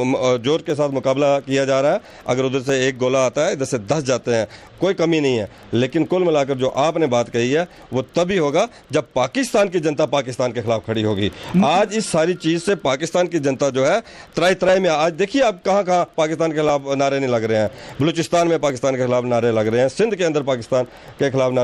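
From 0.70 s to 20.71 s, periodic USB or driver dropouts recur every 2.0 s. Each time, something blocks the audio path for an instant. A tiny slice of sound, around half a millisecond, is skipped outright rather than filled with silence. The waveform jumps across the gap. That jump is heard as a regular tick. There are roughly ten of them, evenly spaced across the clip, and they sound only while signal is present.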